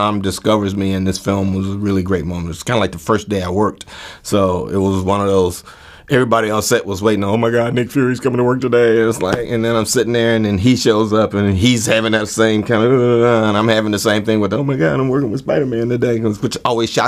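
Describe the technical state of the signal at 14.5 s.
At 14.5 s the signal is intact, with no dropout, clipping, glitch or other technical fault audible at that point.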